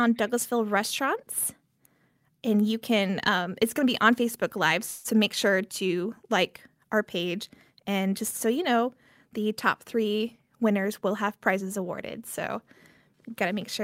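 A speech recording with two timing faults. From 4.85 to 5.07 s there is a call audio freeze: the last sound is stretched into a fading buzz or hiss for about 0.19 s, likely because delayed packets emptied the jitter buffer, and speech then resumes without loss. From 10.20 to 12.57 s a jitter buffer speed-up trims short pitch-period slices, running about 8% fast at unchanged pitch and removing roughly a fifth of a second.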